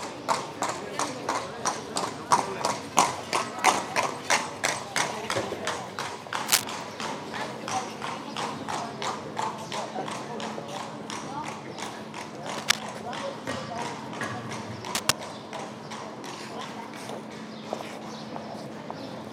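Everyday sound with cable scratch noise at 6.46–6.64, 12.51–12.80 and 14.85–15.13 s. It is dense rustling, about 10 dB then 5 dB above the sound, rather than isolated clicks, likely from a worn connector moving.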